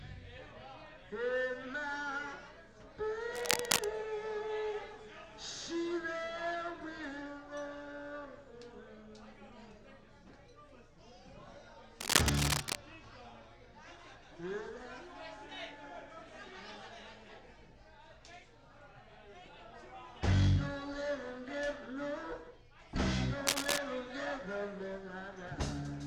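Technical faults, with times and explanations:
3.35–3.85 s, 12.00–12.75 s and 23.47–23.78 s, cable scratch noise: dense, uneven scratching bursts rise a few decibels above the sound for under a second each, likely from a worn cable or connector being moved so its contact resistance fluctuates rapidly.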